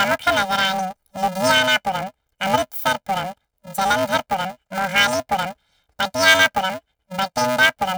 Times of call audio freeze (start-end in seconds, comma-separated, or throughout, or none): none